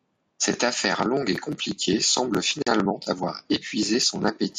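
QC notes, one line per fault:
2.62–2.67 s, gap at a join of encoded pieces: a gap of about 43 ms cuts into continuous speech, with its edges smeared by the codec. The sections were likely encoded separately and joined without removing the encoder's start delay and last-frame padding. Unlike a dropout, which skips ahead, the speech resumes exactly where it stopped, so a short gap is inserted and nothing is lost.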